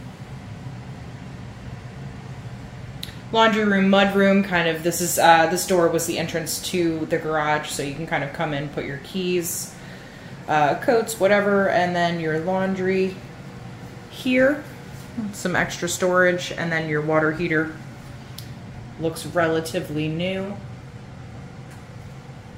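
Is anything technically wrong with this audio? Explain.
No, nothing technically wrong can be heard in this audio. No dropouts, distortion or other technical problems turn up at any point.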